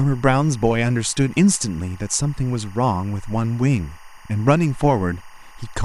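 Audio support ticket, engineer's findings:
Steady chirping warble under the speech, whole clip, roughly 30 dB below it. Timecode bleed: linear timecode at 23.976 fps leaking from an adjacent track or cable, its square wave flipping between tones around 1 and 2 kHz.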